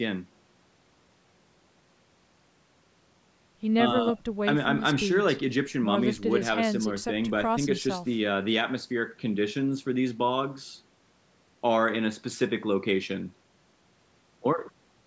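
Nothing technically wrong turns up in this bit of speech; it has simply gone through a call's microphone processing, which trims off the deepest bass and leaves nothing above 8 kHz, and that's just how that path normally sounds.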